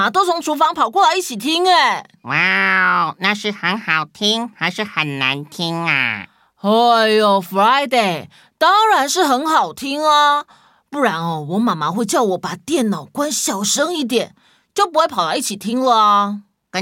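No technical faults turn up anywhere in this speech recording, and the signal runs without any break or defect from its first moment to its last.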